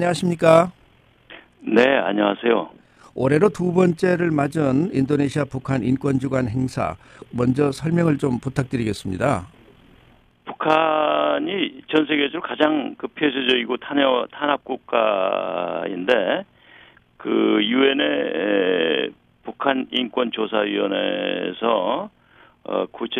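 Overlap-add ripple runs throughout, a rough flutter pulsing around 40 times a second, about 6 dB deep, from windowed frames recombined with overlap that doesn't sum evenly.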